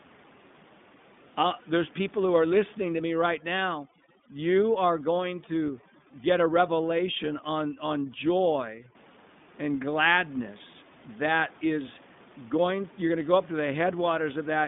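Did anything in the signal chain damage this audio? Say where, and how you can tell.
Yes. At the codec stage, iLBC codec damage runs throughout. Nothing passes above 3.8 kHz, and the speech sounds rough and synthetic. That roughness fits 20 ms frames coded independently at 15.2 kbps.

At the call-processing stage, overdone noise removal runs from 2.94 to 8.95 s, starting after "people who are listening". The room noise, about 25 dB below the speech, drops and breaks up into twinkling specks.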